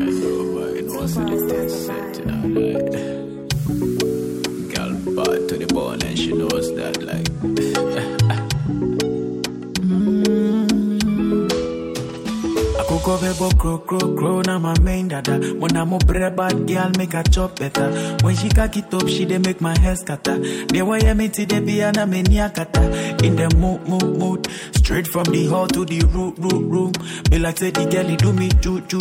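No technical faults can be heard anywhere in the clip.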